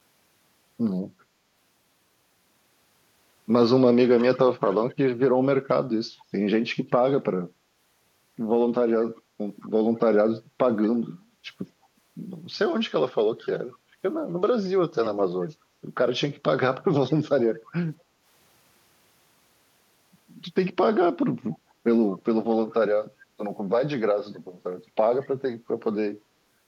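A faint delayed copy of the speech trails the talker by about 211 ms from 4.18 to 5.7 s. It sits about 20 dB below the speech. Shorter scraps follow at 9.61 to 9.69 s, 10.83 to 10.87 s, 13.43 to 13.76 s and 17.1 to 17.72 s. Most are about 30 dB down, and the one at 13.4 s is nearer 25 dB down. This is echo leak. The likely cause is a far-end loudspeaker whose echo canceller let part of the returned sound through.

From 18.04 to 18.24 s the room sound dips by about 6 dB for roughly a fifth of a second. This is background gated by the echo canceller. While the loudspeaker played, the canceller pulled the microphone down. The ambience thins, then returns when the canceller releases.

The echo leak comes back twice more, at 21.52 to 21.58 s and at 22.7 to 22.74 s. Both are brief fragments about 30 dB down, again delayed by 211 ms.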